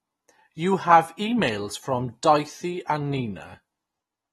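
Throughout the speech, AAC compression damage is plainly audible. Nothing sounds above 12.5 kHz. The dull, smeared quality likely comes from AAC-LC at around 32 kbps.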